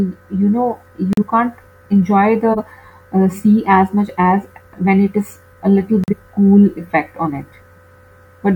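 At 1.13 s the speech drops into a corrupt frame muted gap. Silence cuts in abruptly and lasts 0.10 s, to 1.23 s. That length fits one lost frame. Bits in the compressed stream were damaged. The decoder rejected the frame, and the player filled the slot with silence. The timing around the hole stays intact.

From 2.53 to 2.58 s there is a corrupt frame decoded burst. Here the damaged frame was played anyway. Misread values put energy at the wrong frequencies for roughly one frame. It is heard as a short glitch. It peaks at about -5 dBFS.

At 6.04 s a second muted gap opens. It runs to 6.14 s, again about 0.10 s long. This one points to two consecutive frames being rejected and replaced by silence. The onset is just as sudden.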